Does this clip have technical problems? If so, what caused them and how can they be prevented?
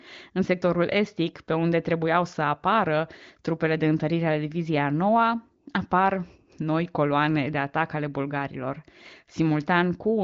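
No, nothing here counts as a fault: the speech is carried by the AMR wideband (HD Voice) codec at 23.05 kbit/s, and its bandwidth stops at about 7.2 kHz, as that path is designed to.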